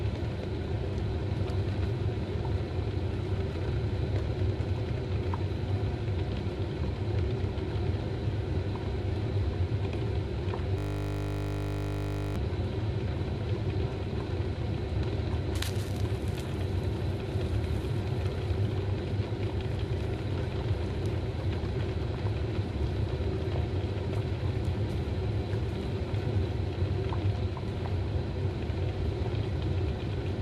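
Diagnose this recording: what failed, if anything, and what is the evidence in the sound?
A system hang loop at the driver or buffer stage sits between 10.78 and 12.36 s. A single 20 ms stretch of audio repeats exactly, 79 times in a row, so the sound collapses into a steady 50 Hz buzz instead of continuing. The host or driver stalled while the audio hardware kept replaying the same small ring buffer. A dropout or an underrun gap would leave silence, and a codec glitch would smear the sound. Here the repetition is identical and locked to one rate.

A frames-out-of-order fault appears at about 29.00 to 29.05 s, in the network or storage path ahead of the decoder. Two neighbouring frames of 21.3 ms each were swapped and decoded in the wrong order. The result is a brief garbled flutter lasting about 50 ms. This differs from packet loss because no audio goes missing: nothing is concealed or skipped, and the timing afterwards stays intact.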